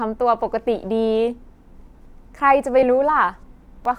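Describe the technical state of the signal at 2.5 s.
At 2.5 s you're sitting inside a run of periodic USB or driver dropouts spanning roughly 1.8 to 3.85 s. Something blocks the audio path every 1.02 s and about a millisecond of the speech gets skipped outright, so you hear a few small, evenly spaced ticks.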